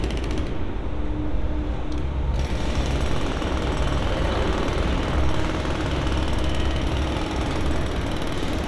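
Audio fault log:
No faults are logged for this clip.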